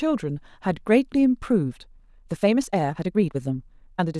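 A speech recording with a time-stretched section running from 1.62 s to the end at 4.19 s. At 1.62 s the pace jumps abruptly to about 1.42 times the earlier rate while pitch holds steady, so delivery turns rushed. The likely cause is software compressing this stretch to fit a shorter duration, preserving pitch by discarding short slices of audio and splicing the remainder together.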